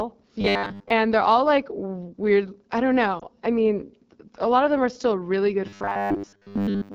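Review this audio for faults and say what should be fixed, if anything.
The whole recording passes through the AMR wideband (HD Voice) codec at 8.85 kbit/s, one of its two lowest rates, and the damage is plainly audible as a rough, raspy texture. At this rate too few bits describe the pulse excitation driving the vocal tract model, so harmonics smear into grit. A spectrogram would show fuzzy, broken harmonic lines below 6.4 kHz and a uniform noise-like band from 6.4 to 7 kHz. Fix: negotiate 12.65 kbit/s or higher on the link.

From 0.41 to 0.90 s, and again from 5.67 s to the end, the sound turns into a rigid metallic buzz at 100 Hz, which is robotic sound from repeated short buffers. The likely cause is starved playback looping a 10 ms chunk, with most of the real audio skipped. A waveform would show an identical short segment tiling over and over, and a spectrogram would show harmonics fixed at multiples of 100 Hz that ignore the natural pitch movement. 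Fix: deepen the jitter buffer and keep the decoding thread from stalling.

Lost AMR speech frames cause a brief dip and warble around 3.19 to 3.25 s. One 20 ms frame failed its checksum, so the decoder reused the previous pitch and vocal tract settings at reduced gain and then recovered with a moment of roughness. The waveform would show a short drop in amplitude, and the spectrogram a faint, flattened patch where the harmonic detail briefly stops changing. Fix: improve radio link quality or add stronger error protection so frames arrive intact.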